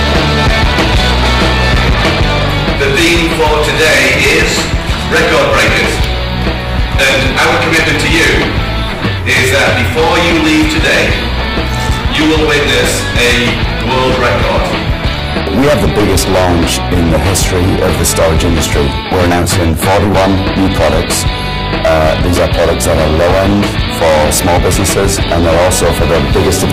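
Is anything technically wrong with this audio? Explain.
Yes. Hard clipping runs throughout: driven about 19 dB past the limit, around a fifth of the samples get cut off. The waveform shows flattened tops, the spectrogram a smear of harmonics reaching high, and the sound is fuzz.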